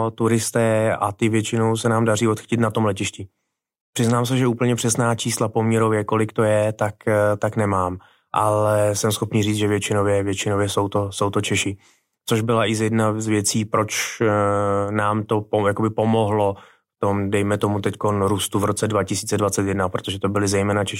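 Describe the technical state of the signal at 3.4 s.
At 3.4 s the speech signal is intact, with no dropout, clipping, distortion or other technical fault audible at that point.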